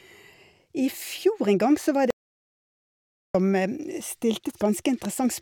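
At 2.10 s the speech stops dead. Complete silence follows until 3.35 s, about 1.24 s in all. This is an audio dropout to silence. No room tone or background noise remains in the gap. That points to the input signal being lost while recording carried on. A disconnected microphone, a broken link or an accidental mute is the likely cause. Whatever was spoken in that stretch is gone. The speech resumes abruptly mid-flow.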